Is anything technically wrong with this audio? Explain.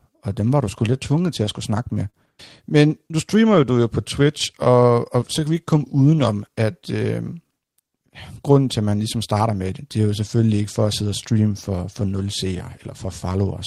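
Yes, this speech has four timing faults.

Clock drift between sender and receiver runs throughout: the sender's clock runs roughly 4% slow, so the jitter buffer keeps draining. On a waveform this appears as slight, uneven stretching.

Repeated timing corrections span 0.10 to 13.33 s. Playback runs at 96% speed as the receiver repeatedly inserts short pieces, adding about half a second. Each is small, heard at most as slight hiccups, and they appear as duplicated waveform cycles.

A short stall from a late packet occurs at 2.10 to 2.16 s. The buffer ran empty, and the last sound was held for 38 ms without losing anything. On a spectrogram it shows as flat, smeared harmonics.

Scattered short gaps occur between 4.65 and 6.55 s. About five lost or late packets were each patched by continuing the previous sound, with the longest about 15 ms. They are heard as brief ticks and show as thin vertical smears.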